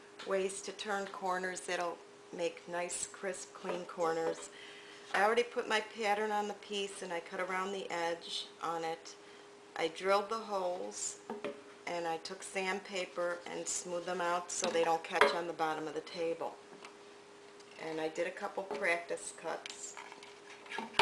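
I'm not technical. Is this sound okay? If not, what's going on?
Yes, this sound is okay, and nothing is going on that needs fixing.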